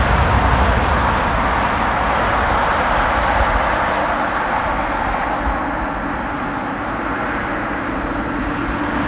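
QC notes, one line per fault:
No faults heard.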